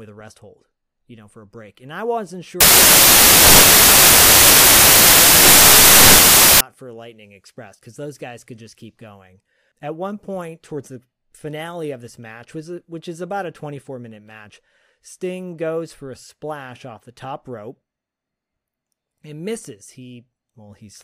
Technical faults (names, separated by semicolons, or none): samples built from the wrong bytes